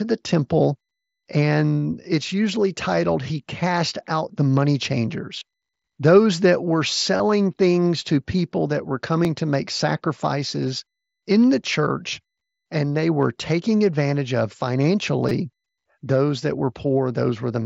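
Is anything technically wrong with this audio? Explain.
Yes, there are two kinds of fault, each happening twice, riding on top of a Bluetooth mSBC headset link.

Concealed Bluetooth headset packet loss hits at 5.40 s and again from 7.17 to 7.20 s, right after "that were" and before "things to people that". Packets between headset and phone went missing, about 15 ms and 22.5 ms worth, which fits two and then three 7.5 ms mSBC frames. The receiver papered over each gap by continuing the waveform with a matching slice of recent audio. Each is a short run of lost frames, heard as a brief buzzy tone held at full level with a little warble as the real sound comes back.

There's also a repeated buffer at 9.25 s, between "to people that were" and "to make sacrifices in", and another from 15.29 to 15.31 s. Fresh audio didn't arrive in time, so the device replayed its last chunk, about 5 ms long, once at 9.25 and four extra times at 15.29. 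The chunk size points to a very small buffer, something like 80 samples at 16 kHz. Nothing is really lost. At 9.25 it's a tick, and at 15.29 the stacked repeats give a short buzzy stutter with hard joins.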